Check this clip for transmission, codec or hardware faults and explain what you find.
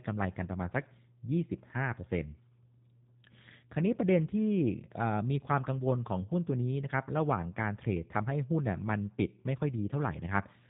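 Two faults are present: the whole speech clip has passed through a low-rate speech codec, and one brief dropout was patched over by the decoder.

G.729 codec, throughout: the speech is rebuilt from a vocal tract filter, a pitch predictor and a few pulses per subframe, so it sounds rough and slightly synthetic, with plainly audible damage consistent with G.729A at 8 kbit/s. A spectrogram shows nothing above 4 kHz and smeared harmonics.

VoIP packet loss concealed by the speech codec, from 5.65 to 5.67 s: a gap that fits a single lost 10 ms frame was filled by extrapolating the previous pitch and filter at falling gain, giving a short stretch of prolonged sound that fades. The waveform shows a repetitive, decaying stretch there.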